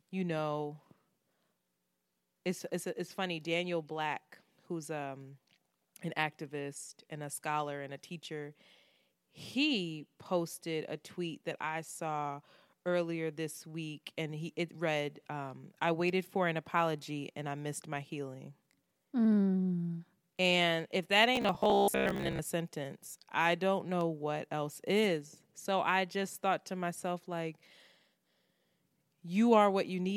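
Speech, with robotic sound from repeated short buffers from 21.36 to 22.39 s, between "if that" and "a sentence I don't": a rigid metallic buzz near 67 Hz, likely from a 15 ms chunk replayed while about half the audio is skipped, unlike codec warble, which keeps every syllable.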